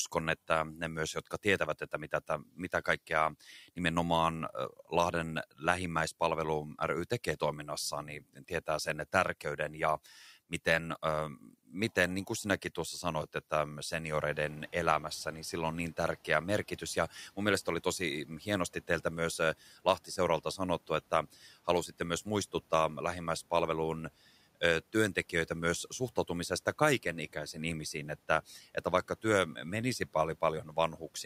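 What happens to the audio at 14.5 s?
Noise suppressor catching up, from 14.27 to 14.77 s. Around 14.5 s the room noise jumps by about 18 dB, and the suppressor's noise estimate is still tuned to the quieter background. For that half second the louder noise passes with too little reduction, so it swells up audibly. Once the estimate adapts, after about 500 ms, the noise sinks by about 7 dB just before "niin sillä on niin", settling about 28 dB under the speech.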